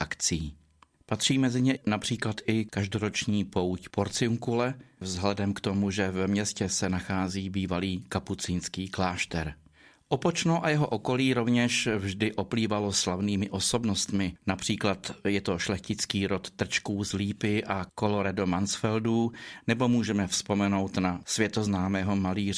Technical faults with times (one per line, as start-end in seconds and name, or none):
none